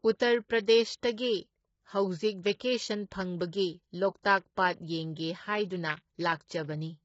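Throughout the speech, the audio was likely squeezed through low-delay AAC compression of the AAC-ELD kind used for video calls, at a rate the damage suggests is around 16 kbps. At such a low rate the bits run short. The voice sounds rough and grainy, with noise filling the gaps between harmonics, and the damage is heavy. Nothing remains above 7.7 kHz, leaving the top band dull and missing.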